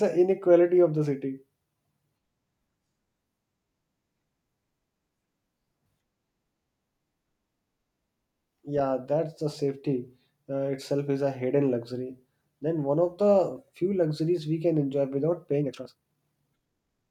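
From 15.57 s to the end of the clip, just after "we can enjoy without", the speech suddenly runs at about 1.93 times its earlier pace. The pitch does not rise with it. This is a time-stretched section. The likely cause is software squeezing the audio to fit a shorter length. It keeps the pitch by dropping short slices of sound. The cuts make the delivery sound rushed.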